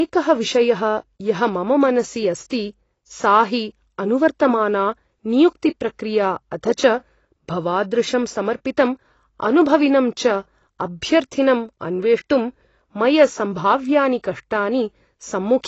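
Throughout, the speech is dull, with nothing above 7.9 kHz and a plainly audible fizzy warble on sibilants, likely AAC compression at a low bitrate, consistent with about 24 kbps.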